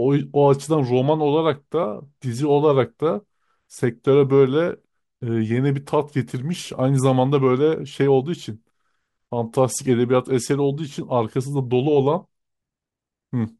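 No audible technical faults.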